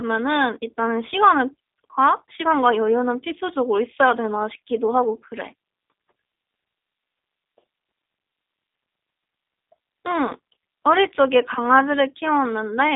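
Speech runs through G.729 coding from start to finish. The rough, slightly synthetic tone points to an 8 kbit/s G.729A stream rebuilding each frame from a filter, pitch predictor and pulses. A spectrogram shows energy confined between 250 Hz and 3.7 kHz, blank above 3.8 kHz.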